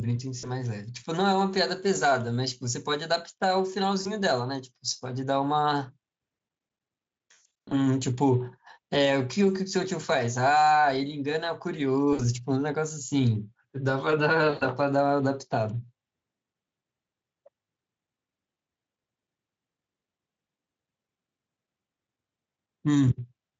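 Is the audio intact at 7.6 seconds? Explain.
No. The moment at 7.6 s sits inside VoIP packet loss concealed by the speech codec, which spans 7.31 to 7.74 s. About 300 ms of audio is lost across 400 ms, with the longest gap 140 ms. The decoder repeats its last pitch and filter with falling gain, so the sound is stretched into a buzzy tone or coloured noise that fades. On a spectrogram this shows as smeared, static harmonics; on the waveform it shows as a decaying envelope.

Gain pumping is present here too. The gain swings by about 5 dB, which points to a fast limiter acting on gain that was likely set far too high. The waveform shows a breathing, squashed envelope.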